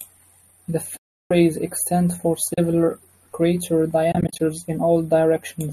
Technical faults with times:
0.97-1.31 AAC frame loss with muting
2.54-2.58 AAC frame loss with muting
4.12-4.40 AAC frame loss with muting

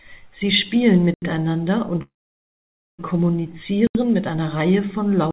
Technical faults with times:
1.14-1.22 block of digital silence
2.02-3.00 call audio freeze
3.87-3.95 block of digital silence
5.31 block of digital silence

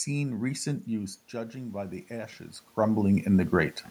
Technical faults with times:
0.85-3.81 automatic gain rising

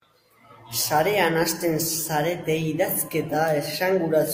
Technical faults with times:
none

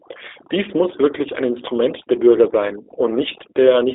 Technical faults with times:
0.00-3.94 overdone noise removal
0.00-3.94 G.729 codec

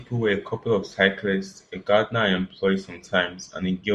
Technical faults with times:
none

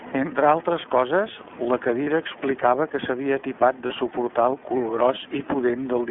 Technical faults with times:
0.00-6.10 iLBC codec
2.04-2.08 lost iLBC frames
3.86-3.91 lost iLBC frames

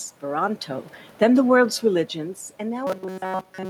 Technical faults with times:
0.24-2.18 automatic gain falling
2.87-3.69 robotic sound from repeated short buffers

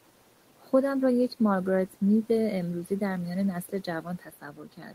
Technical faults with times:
3.63-4.94 speech cut by the noise suppressor

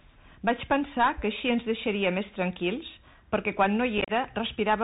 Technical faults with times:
0.00-4.84 Bluetooth CVSD headset codec
3.98-4.11 unconcealed Bluetooth headset packet loss

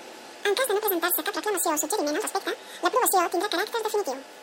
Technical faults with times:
0.00-4.42 audio read two samples at a time (double speed)

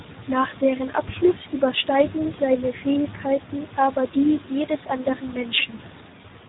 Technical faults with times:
0.00-6.48 Speex codec

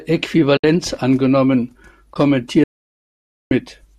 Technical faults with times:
0.56-0.64 AAC frame loss with muting
2.13-2.16 AAC frame loss with muting
2.64-3.51 audio dropout to silence

